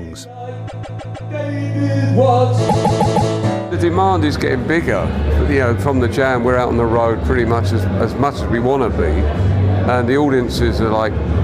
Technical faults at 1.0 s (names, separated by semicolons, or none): repeated frames